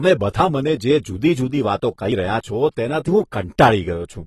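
A short speech recording carries audible AAC compression damage from start to finish. Nothing sits above about 12.1 kHz, so the top end sounds dull, and sibilants and held vowels take on a smeared, warbling, fizzy texture. On a spectrogram the energy ends at a flat horizontal ceiling near 12.1 kHz. The likely cause is AAC-LC encoding at a low bitrate, consistent with roughly 32 kbps.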